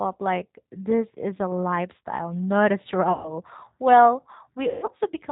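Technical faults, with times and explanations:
Throughout: G.729 codec. Speech is squeezed to 8 kbit/s, with nothing above 4 kHz and a plainly rough, synthetic edge from the pulse-based rebuild.
3.13–3.34 s and 4.68–4.89 s: VoIP packet loss concealed by the speech codec. Right after "a lifestyle not a", about 120 ms goes missing, and later roughly 160 ms is lost over 200 ms. The decoder stretches the last sound into a fading buzzy tone or coloured noise, and the voice stays weak briefly afterwards.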